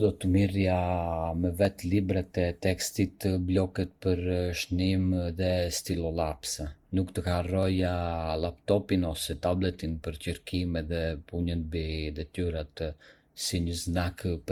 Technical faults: generation loss; dropped samples

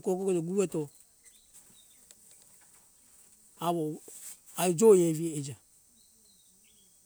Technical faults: none

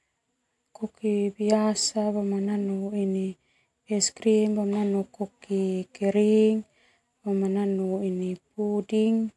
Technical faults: none

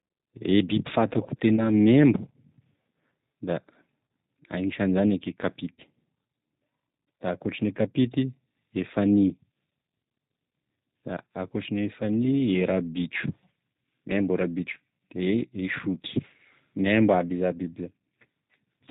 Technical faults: G.729 codec; VoIP packet loss concealed by the speech codec

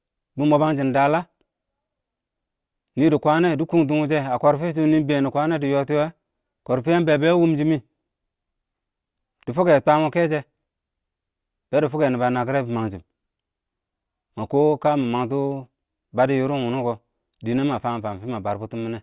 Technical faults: none

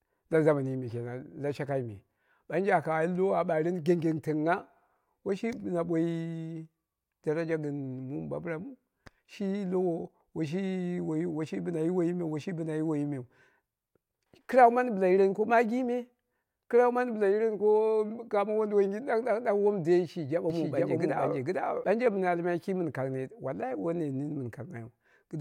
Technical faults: doubled audio track

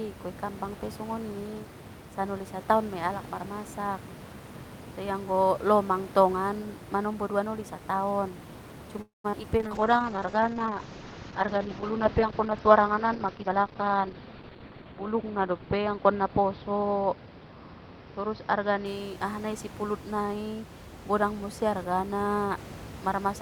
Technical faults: long network dropout; short concealed packet loss; call bitrate drop; jitter buffer slow-down; jitter buffer speed-up

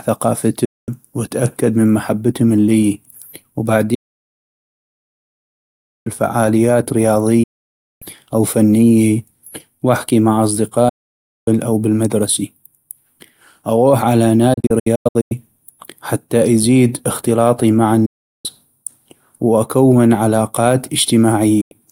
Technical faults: digital broadcast dropout

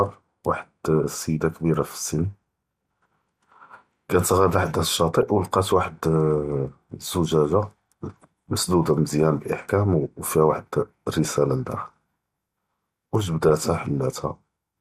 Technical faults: MP2 compression; DAB burbling

